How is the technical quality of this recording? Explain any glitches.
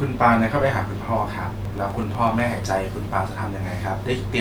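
The recording has one clear glitch. From 1.65 to 2.78 s there is a train of clicks: likely interference or a faulty connection injecting about ten similar pulses at a regular 8.1 per second, heard as steady ticking that pokes out above the speech.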